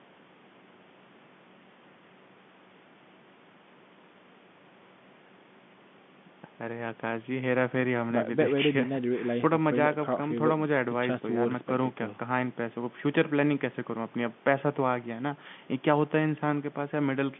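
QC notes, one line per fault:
No faults heard; telephone-band speech from a call.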